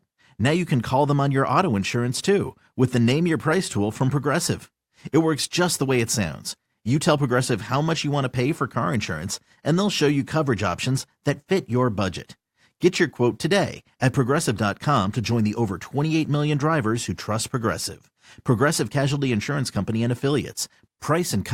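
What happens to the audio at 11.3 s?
Nothing goes wrong at 11.3 s; the speech there plays through intact, with no dropout, click, distortion or other fault at that moment.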